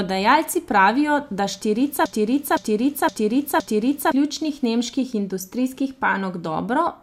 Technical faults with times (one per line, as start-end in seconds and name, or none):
2.06-4.12 broken-record loop